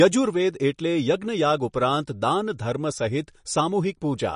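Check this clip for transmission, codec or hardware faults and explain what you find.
One fault runs throughout the clip: likely MP3 compression starved of bits, consistent with about 40 kbps. The encoder cuts everything above 10.5 kHz and switches weak frequency lines on and off between frames, so the speech sounds dull and audibly watery.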